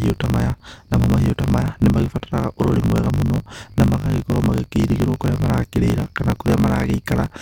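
Throughout, a truncating block size mismatch drops each block's tail, consistent with 1024-sample writes, causing a 50 Hz buzz and speech 1.16 times faster at near-normal pitch.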